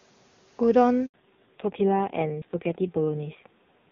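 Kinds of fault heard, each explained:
Handover gap: at 1.06 to 1.14 s, the sound dies away for about 80 ms while the call switches networks and no frames arrive.
Fallback to narrowband: from 1.14 s, nothing above 4 kHz remains, and the sound turns dull and rough, consistent with a low-rate narrowband codec.
Audio missing between chunks: at 2.42 s, a skip joins the two sides with no silence, likely from a lost piece of roughly 50 ms at a 1-second chunk boundary.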